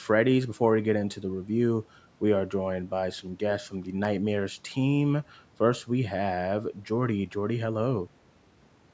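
From about 1.81 s to 8.52 s there's a regular click in the speech, roughly four of them, spaced every 2.24 s like clockwork. That steady spacing is the giveaway for clock drift buffer slips. Two devices are likely running on separate clocks that disagree by something like 70 ppm, so the buffer between them creeps until a tiny block of around seven samples gets dropped or repeated. The call-mic processing leaves nothing above 8 kHz.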